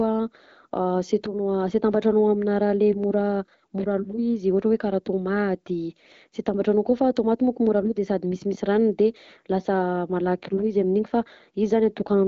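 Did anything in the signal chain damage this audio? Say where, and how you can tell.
No, nothing in the chain damaged this speech.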